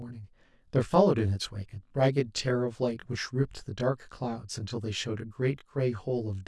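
Rough, slightly doubled speech throughout the clip. This is channel delay (comb filtering): one channel arrives roughly 20 ms late, and summing to mono cancels shared content at evenly spaced notches starting around 20 Hz.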